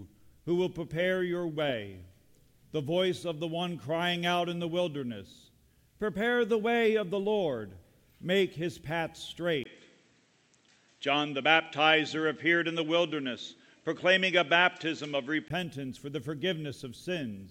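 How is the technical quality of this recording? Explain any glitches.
One fault affects the recording. From 9.64 to 15.50 s, the input likely switched to a poorer device. Nothing passes above 8.1 kHz, so the sound turns dull. A 20 ms gap marks the switch. The level shifts by about 5 dB, and a faint new noise floor appears.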